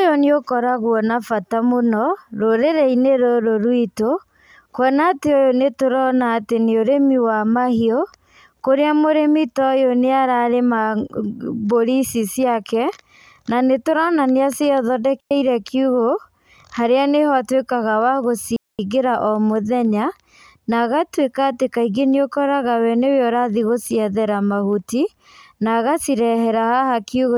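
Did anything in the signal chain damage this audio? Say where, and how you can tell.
Yes: a digital wireless dropout on the radio link. The speech mutes at 15.20–15.31 s and 18.56–18.79 s, between "harĩa nĩho atuĩkaga wa" and "o mũthenya". The receiver, missing too much data, fades to near silence. The waveform shows flat gaps, and the spectrogram shows blank columns without noise bursts.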